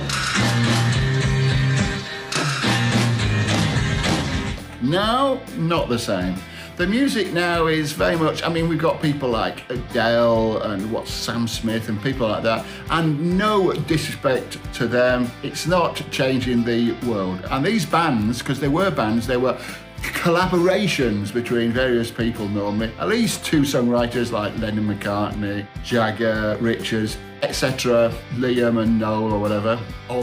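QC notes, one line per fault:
9.56 s and 27.41 s, dropped buffer (overrun): the sound jumps ahead about 10 ms with no silent gap, likely samples overwritten before being read.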